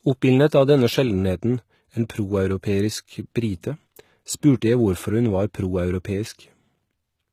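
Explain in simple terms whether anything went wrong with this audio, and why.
Something went wrong for the whole clip. The speech sounds plainly damaged from start to end, with a gritty, metallic treble and lispy s sounds. Nothing is heard above about 15 kHz. This is likely HE-AAC compression, which rebuilds the treble by copying lower sounds upward.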